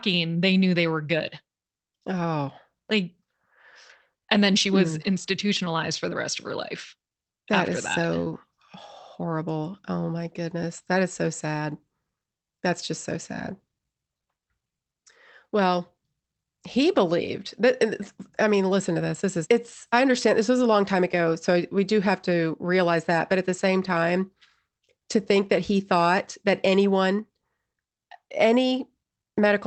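Nothing here goes wrong at all; the speech just sounds like an ordinary call over the Opus codec, with the top end stopping around 8 kHz as that kind of path normally does.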